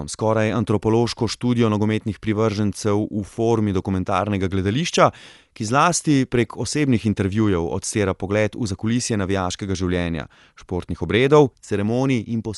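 Throughout the speech, Dolby Digital compression is plainly audible, likely from a low-bitrate encode around 64 kbps. The band ends sharply at 11.5 kHz, a flat ceiling on a spectrogram, and starved frequency lines are filled with dither noise, giving a dull, rough flutter around tones.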